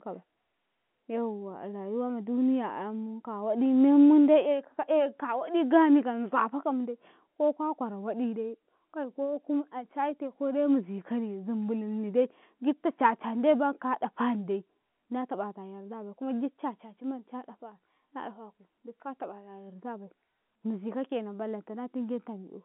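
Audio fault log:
Nothing stood out on listening; the speech comes through as ordinary telephone-band audio, with nothing audible above about 3.4 kHz.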